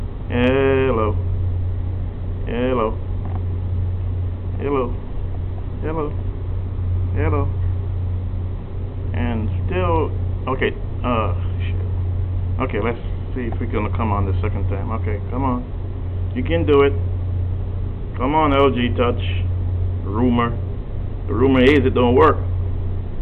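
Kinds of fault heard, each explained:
No technical faults can be heard in this clip.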